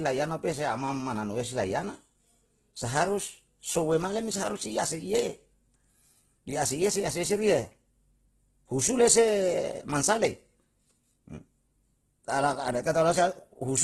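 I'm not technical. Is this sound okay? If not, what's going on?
No. The speech was likely squeezed hard by Opus compression, which saves space by roughly rebuilding detail it can't afford to keep. Throughout, the voice sounds grainy and rough instead of clean, and nothing above about 12.2 kHz survives, so the crisp top end is missing.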